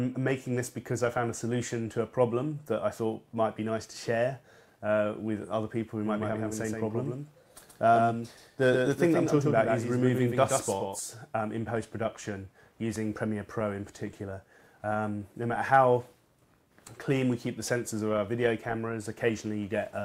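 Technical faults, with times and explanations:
6.05 to 10.99 s, doubled audio track: for these five seconds everything comes through twice, with a second full-band copy trailing roughly 150 ms behind and sitting around 5 dB under the original. It doesn't decay or pick up any room colour, and it cuts in and out abruptly at both ends. That's most likely a second capture path running late, or an edit that left two copies out of step.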